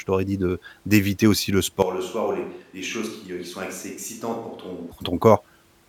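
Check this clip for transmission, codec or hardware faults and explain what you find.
One fault stands out, a switch to a distant microphone from 1.82 s to 4.92 s. It starts just after "de d'éviter aussi le". The speech suddenly turns roomy and hollow. It loses bass and drops by roughly 10 dB. Room noise rises to around 30 dB below the speech. The likely cause is that the close microphone's signal dropped out and a farther pickup took over. That pickup hears more room reflection and less direct sound. At 4.92 s the close sound snaps back.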